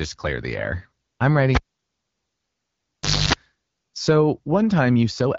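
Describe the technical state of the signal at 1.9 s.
At 1.9 s the sound has collapsed to near silence, inside a dropout that opens with a pop at 1.55 s and ends with another pop at 3.33 s, after a short burst of 50 Hz mains buzz lasting about 0.27 s. This is a cable pulled and plugged in: the live lead was out for roughly 1.7 s, and the buzz came from only the plug tip touching on reinsertion.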